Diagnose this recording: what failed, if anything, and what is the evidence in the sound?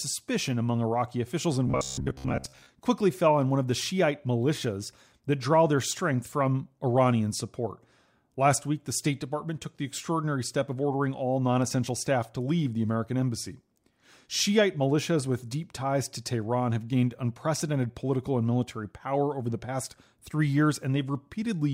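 The fault sits at the driver or buffer stage: robotic sound from repeated short buffers, from 1.68 to 2.69 s, between "officials and" and "quickly fell on one". For that second the speech turns into a rigid metallic buzz near 66.8 Hz, which fits a block of about 15 ms being replayed, with most of the real audio skipped. The likely cause is input arriving too seldom. Unlike codec warble, the pitch stays fixed rather than wandering, while the sound still loosely follows the speech.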